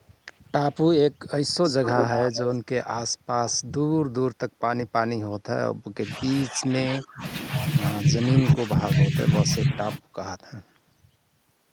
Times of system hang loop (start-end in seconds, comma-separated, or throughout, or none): none